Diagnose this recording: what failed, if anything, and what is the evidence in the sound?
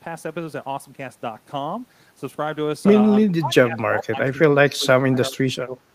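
From 3.26 to 5.74 s the speech dips, by up to about 25 dB, for roughly a second and a half in total. This is speech suppressed in double talk: a call-processing echo canceller likely could not separate the near talker from the overlapping far-end echo and turned the near talker down with it.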